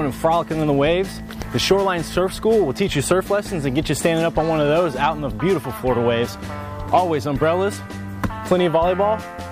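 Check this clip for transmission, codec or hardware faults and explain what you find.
Nothing stood out on listening to this clip.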